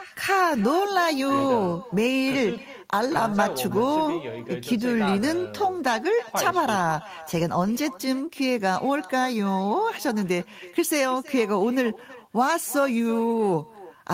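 Echo with no canceller runs through the whole clip: the far end's loudspeaker output leaks back into its microphone and nothing strips it out, so every phrase returns around a third of a second later, a thin copy sitting about 18 dB below the speech.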